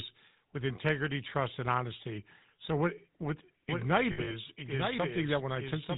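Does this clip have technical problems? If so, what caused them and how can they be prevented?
Yes. The speech throughout has a buzzy, gravelly roughness with nothing above 4 kHz, the signature of the GSM full-rate codec, consistent with its 13 kbps coding. It rebuilds the voice from a vocal-tract model driven by sparse pulses. Prevent it by using a wideband codec such as AMR-WB or Opus instead.

From 3.69 s, just after "what what", to the end, a second full-band copy of the speech follows roughly a second behind, about 5 dB quieter, starting abruptly with no room colour. This is likely a doubled audio track from a second, slower capture path. Prevent it by routing the source through one path only.

Between 4.12 and 4.36 s the sound freezes into a rough, metallic ring, the mark of lost GSM frames. About 100 ms went missing in bursts up to roughly 70 ms, and each gap was filled by repeating the last good frame. 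Prevent this with a stronger radio link or better error protection.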